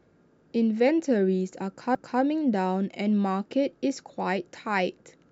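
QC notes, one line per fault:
1.95 s, CD skip: the speech breaks with a short tick and a near-instant dropout of roughly 5 ms, then resumes from a different point. A knock or disc flaw threw the laser onto another turn of the spiral, so playback briefly muted and continued elsewhere.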